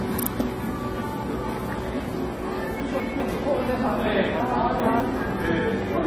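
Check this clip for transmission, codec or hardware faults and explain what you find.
Two kinds of fault are present: codec damage across the whole clip and two jumbled passages.

AAC compression, throughout: nothing sounds above about 14.1 kHz, and the sound is dull and smeared with a fizzy, warbling texture, likely from AAC-LC at a low bitrate around 32 kbps. That texture sets it apart from a simple low-pass filter.

Chunks out of order, 2.8 to 3.2 s and 4.4 to 5.0 s: blocks of roughly 200 ms play late, one block behind in the first passage and two behind in the second, leaving hard joins. Unlike dropouts, no audio goes missing and no silence appears. The existing material is only heard in the wrong order.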